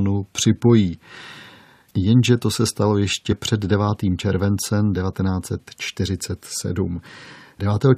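At 3.31 to 3.33 s, just after "to se stalo", damaged data in a compressed stream produces a brief glitch as the decoder misreads corrupted frames and hunts for the next valid header.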